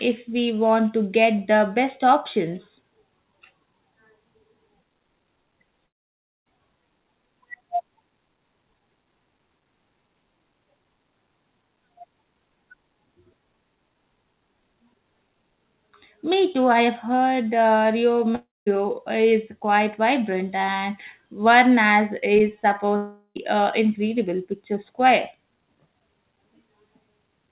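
At 5.86 s the sound smears into a fading buzz and then goes quiet until 6.47 s, about 0.6 s lost. The same happens from 18.35 to 18.68 s, just before "is quite vibrant and", and from 22.96 to 23.37 s, before "an incredible picture square". These are likely long network dropouts: no packets arrived, the receiver stretched the last sound until it died away, and playback resumed without the missing audio. Throughout, the band stops at 4 kHz, as expected of a narrowband call codec.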